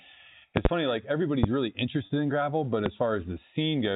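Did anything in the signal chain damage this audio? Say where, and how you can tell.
Yes. Four sharp pops or thumps land on top of the speech, which carries on underneath: a double pop from 0.57 to 0.68 s peaking about 25 dB above the speech, then single pops at 1.43 s and at 2.86 s, the last just after "in gravel but", each about 20 dB up. These loud pops are likely a voltage step in the analogue wiring, from a plug, switch or static discharge, shaped and briefly ringing through the stages after it.

At 2.06 s a gap of about 40 ms, just before "in gravel but", sounds like a briefly held, buzzy note instead of a clean continuation. This is packet loss with pitch repetition at the network stage: the receiver bridged the missing audio by repeating the last pitch period, which fits two lost 20 ms packets. The speech then resumes normally. Throughout, the 4 kHz telephone band of the A-law coding is audible.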